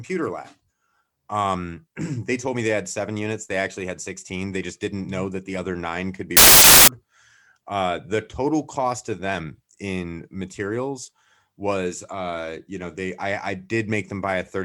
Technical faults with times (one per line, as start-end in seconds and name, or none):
6.37-6.88 samples built from the wrong bytes